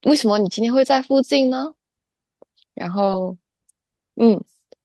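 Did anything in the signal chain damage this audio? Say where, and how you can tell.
Yes: short concealed packet loss at about 3.05 to 3.09 s, a network-stage fault. About 20 ms of speech arrived too late for the decoder, so the receiver extrapolated the preceding sound to fill the gap and cross-faded back, leaving a brief smeared wobble.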